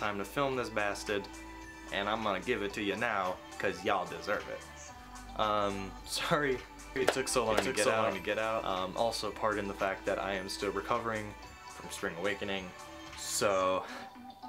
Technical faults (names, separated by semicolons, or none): doubled audio track